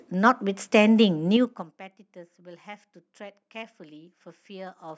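Speech clip, band-limited to 8 kHz by call microphone processing, with zipper noise from 1.28 to 1.79 s. Over that half second the level falls by about 25 dB in coarse steps of about 4 dB, at around ten steps per second. The gain jumps to each new value with no interpolation, and each jump puts a small discontinuity into the waveform. The result is a rapid ticking, zipping texture riding on the speech while the level drops.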